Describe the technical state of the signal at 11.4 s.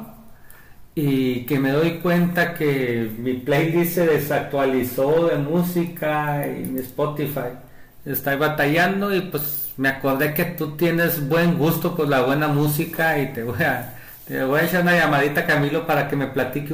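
At 11.4 s the speech signal is intact, with no audible fault at that moment.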